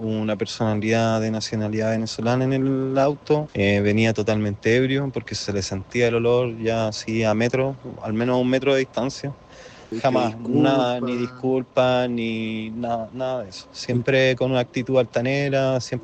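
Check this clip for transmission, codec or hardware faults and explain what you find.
Nothing here trips any alarms; the audio just rolls along without anything to flag on the transmission, codec or hardware side.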